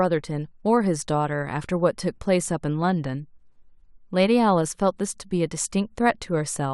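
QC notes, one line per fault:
No fault found in this speech clip, so there are no QC notes to list.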